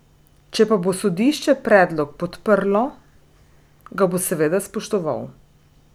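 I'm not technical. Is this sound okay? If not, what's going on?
Yes, this recording has no technical problems. Nothing in it needs fixing.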